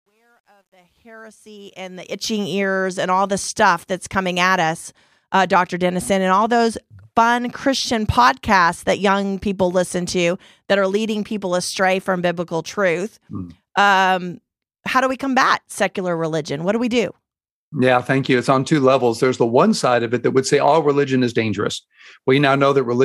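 Truncation distortion on a fade runs from 0.0 to 2.38 s at the start of this speech clip, just before "ears and all the". The fade-in lifts the level, but the gain stage keeps too few bits and adds no dither, which fits about 11-bit resolution. At the quietest part, from 0.0 to 1.24 s, the waveform collapses into a few coarse square steps, so the sound turns gritty.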